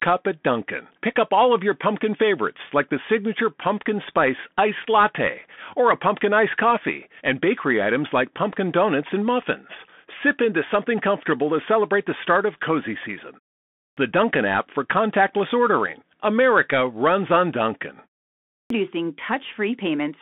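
The whole recording carries a Bluetooth CVSD headset codec sound, consistent with a 64 kbps CVSD link. The speech sits in a narrow band of about 200 Hz to 3.5 kHz with nothing above 3.8 kHz. One-bit delta coding leaves a grainy hiss, and s sounds turn scratchy.

At 13.69 s, just after "start of cozy season", there is a clipped start after a pause. The output path dozed through the 0.38 s gap and took about 0.28 s to wake, so speech resumes abruptly with its onset missing until 13.97 s.

The same fault recurs at 18.45 s after a 0.45 s pause. This time about 0.25 s of the restart is lost before sound returns at 18.70 s.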